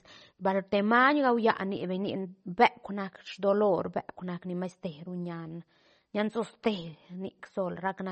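MP3 compression artefacts run through the whole of this speech clip, from start to end, and they are plainly audible. There is nothing above about 8.3 kHz, a hard treble ceiling that the encoder likely imposed when it ran short of bits, which fits a low bitrate around 32 kbps. With so few bits, weak frequency components are dropped and return unevenly from frame to frame, leaving the speech sounding watery and swirly, and dulled at the top.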